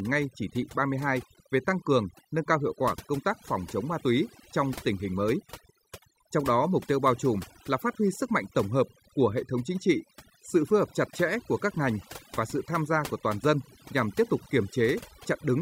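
Overdone noise removal runs through the whole speech clip: a noise reduction stage set far too aggressively pulls individual frequency bands down whenever they sit near its noise estimate, so the background drops and breaks up into twinkling specks, and quieter parts of the voice vanish with it.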